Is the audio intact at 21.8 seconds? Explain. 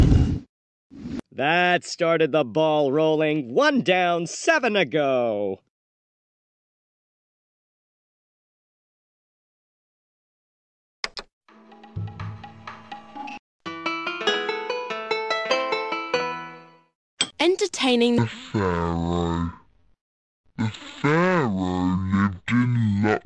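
No. A wrong sample rate fault runs from 18.18 s to the end at 23.25 s, covering 21.8 s. The samples are clocked out at half the rate they were captured at, with no conversion, which fits 48 kHz material played at 24 kHz. Everything therefore plays at 0.5× speed and drops a full octave (12 semitones), so the sound at that moment is stretched, slow and deep.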